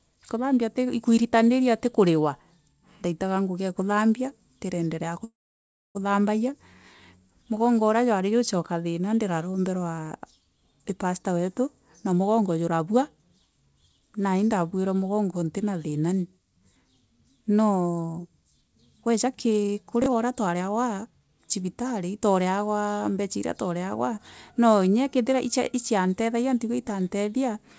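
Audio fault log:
5.24–5.97 s, call audio freeze: right after "ngugi ee kuthambia ndiraendelea" the sound stalls, a short fading tail from the last sound gives way to about 0.64 s of silence, then it resumes where it stopped. Likely delayed packets emptied the jitter buffer, inserting a 0.71 s gap without losing anything.
11.66–13.29 s and 19.06–21.29 s, jitter buffer speed-up: the sound hurries at unchanged pitch, first after "pastor wetu" at about 109% speed, then at about 125% leading into "cibitari twareegwa". The buffer was trimming excess delay by cutting many pitch-period-sized slivers, roughly 150 ms and half a second in total.
20.02–20.06 s, chunks out of order: inside the second speed-up there is a brief garbled jolt. One short piece, which fits a 20 ms chunk, played one chunk late after the piece meant to follow it, so nothing is missing but three hard joins break the flow.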